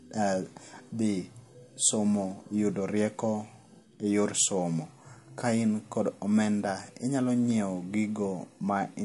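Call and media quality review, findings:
MP3 compression, throughout: speech sounds watery and swirly, with chirpy, metallic s sounds and nothing above 11.3 kHz. Likely an MP3 encode starved of bits, fitting something near 48 kbps, so the treble's chopped and weak bands flicker frame to frame.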